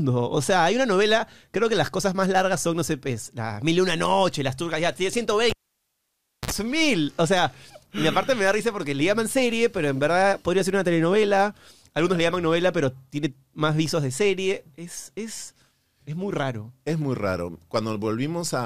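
At 5.50 s the audio drops out with a pop, falls to near silence for about 0.96 s, then a 58 ms burst of 60 Hz mains buzz precedes a second pop at 6.51 s: a cable pulled and plugged in while live. The waveform shows spikes bracketing a flat gap, and the spectrogram shows a brief 60 Hz harmonic comb just before the signal returns.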